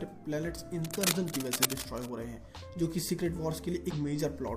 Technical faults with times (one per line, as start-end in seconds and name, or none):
0.84-2.13 cable scratch noise
3.90-3.94 damaged data in a compressed stream